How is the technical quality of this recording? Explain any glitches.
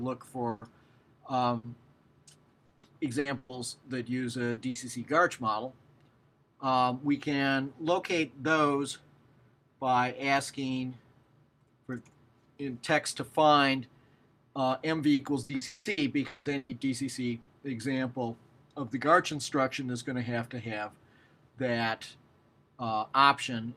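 The recording has audible transmission damage from packet loss.

Bursts of packet loss at 0.49–0.64, 1.57–1.66, 4.51–4.60, 4.69–4.78 and 17.41–17.50 s: lost packets are covered by extending and fading the last sound, then 60–120 ms of audio is skipped.

Repeated packet loss (robotic sound) at 2.65–3.52 s and 15.13–16.72 s: successive gaps, up to 180 ms, are patched one after another, giving choppy audio with pieces missing.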